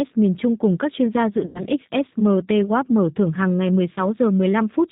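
The speech has been squeezed through a G.729 codec for its whole length, rebuilt from a vocal tract model, pitch predictor and a few pulses per frame, which fits an 8 kbit/s G.729A link. Everything above 4 kHz is gone, and the voice sounds thin, rough and plainly synthetic.

VoIP packet loss concealed by the speech codec appears twice. From 1.46 to 1.63 s, just after "các chuyên gia dự", about 90 ms of packets went missing. The decoder extended its last pitch and filter at falling gain, so the sound smears into a stretched, fading tone or coloured noise and stays weak briefly afterwards. A shorter gap of about 20 ms at 3.95 to 4.01 s, after "mở thưởng hàng ngày", leaves a brief stretched blur before the voice recovers.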